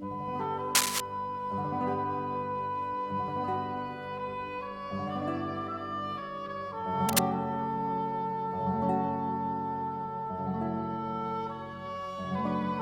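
Cable scratch noise appears at 0.75 to 1.00 s and again at 7.09 to 7.25 s: brief, dense, uneven rustling that rises roughly 5 dB above the sound. It is likely from a worn cable or connector shifting, its contact resistance jumping rapidly.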